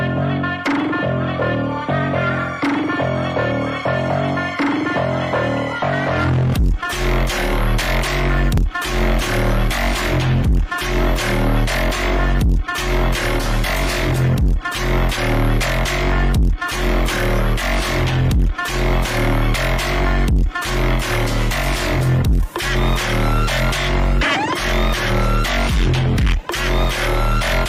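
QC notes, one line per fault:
Nothing to flag here; this one sounds fine all the way along.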